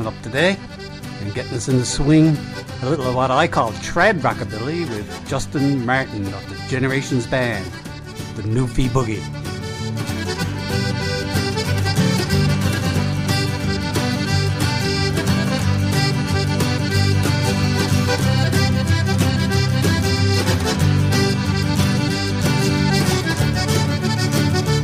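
Nothing in the audio stands out as a technical problem at any point, so there's nothing here to flag.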